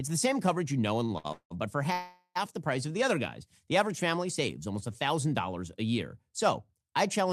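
Right around 1.05 s there's a short stall from a late packet. The sound hangs for about 44 ms between 1.05 and 1.12 s, then picks up exactly where it left off. Another follows at 1.18 to 1.26 s, just after "coverage you know and", held about 64 ms. In both, the jitter buffer ran dry and the receiver stretched the last bit of sound to cover the wait. Nothing's lost, but you hear a brief smeared hold with a faint buzz.

Then come two proper call audio freezes, most likely packets held up in transit until the buffer emptied. From 1.32 to 1.53 s, still before "but for", the last sound carries on as a fading buzz for about 183 ms, with roughly 80 ms of that dropping to silence. The longer one runs 1.93 to 2.37 s, between "but for" and "the price of". It's a 429 ms gap that ends in about 50 ms of silence before the speech resumes intact.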